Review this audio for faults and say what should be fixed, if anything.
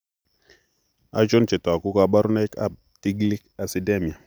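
Nothing stood out on listening, so there is nothing here that needs fixing.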